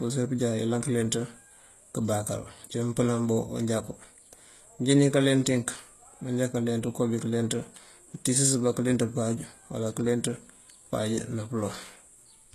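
From start to finish the speech has a bright but synthetic top end. The s sounds come across gritty and metallic, and nothing is heard above about 12.3 kHz. The damage is plainly audible, and it is likely HE-AAC compression at a rate consistent with around 16 kbps. Only the lower spectrum is truly coded. The treble is rebuilt by copying lower bands upward under a coarse envelope, so its harmonics no longer line up with the real ones.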